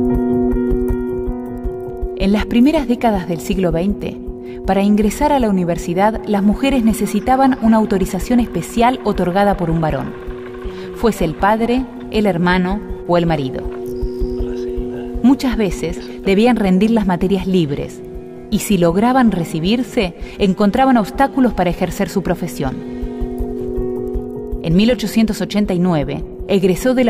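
Nothing here calls for a technical comment, as the audio runs along without any fault worth pointing out.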